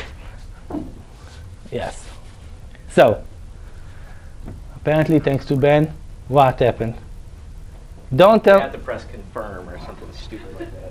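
From start to finish the audio carries a 50 Hz buzz: the resampler restarted on every block. The 24 kHz to 48 kHz conversion was run on each 20 ms block in isolation, so at every block boundary the filter worked from missing or wrapped-around neighbours and left a small error. Unlike mains hum, which also sits near 50 Hz, this buzz vanishes whenever the sound stops.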